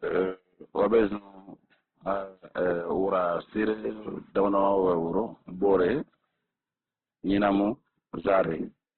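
From start to finish the speech is band-limited, with nothing above 4.3 kHz, and the heavy damage sounds rough and grainy, with a noisy texture in place of clean harmonics. The likely cause is Opus compression in its CELT music mode at a very low rate, which fits roughly 12 kbps. Short of bits, the encoder narrows the bandwidth and fills the remaining bands with folded or noise-like content, so sibilance and upper detail are lost.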